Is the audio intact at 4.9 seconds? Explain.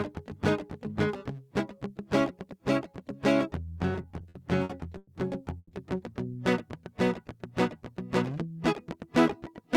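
No, repeated stalls (stutter) run from 3.93 to 5.09 s. The playback buffer kept emptying, so the music drags and stutters through about 260 ms of held sound.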